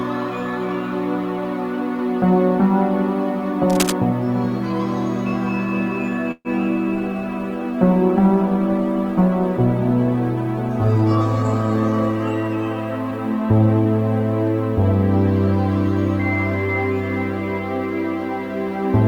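Cable scratch noise at 3.70 to 3.94 s lays a burst of uneven rustling over the audio, close to its own level, likely from a worn connector or cable being moved. Call audio freeze at 6.31 to 6.48 s stretches the last sound into a fading buzz for about 134 ms, including roughly 40 ms of silence, likely from packets held up in transit. Playback then resumes where it stopped, with nothing lost. Call bitrate drop from 6.96 to 12.41 s leaves the audio rough and dulled for about 5.4 s, which fits the encoder being cut from about 32 to 16 kbps after the bandwidth estimate fell. Jitter buffer speed-up at 13.11 to 13.99 s makes the audio run about 9% faster at unchanged pitch, as the receiver trims around a tenth of a second in short pitch-period pieces to reduce delay.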